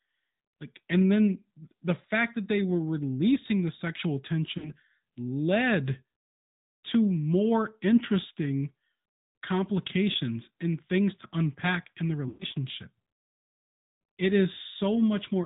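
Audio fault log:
throughout, AMR narrowband mobile codec: speech sounds buzzy and plainly synthetic, consistent with AMR-NB at 10.2 kbps, because the codec rebuilds the voice from a vocal-tract model fed by sparse pulses. A spectrogram shows nothing above 4 kHz, and the harmonics look smeared.
4.58–4.72 s, 10.12–10.15 s, 12.28–12.45 s, lost AMR speech frames: the decoder stretched the last good pitch and vocal-tract settings with falling gain. After "were releasing the sexual" there is a brief warble of about 40 ms, which fits two lost frames. A single 20 ms dip comes before "and things to unpack". After "to unpack in the", a drawn-out tone lasts about 120 ms and fades toward silence, then the voice returns weak. The waveform shows a decaying, repetitive envelope at each loss, and the spectrogram shows frozen, blurred formants.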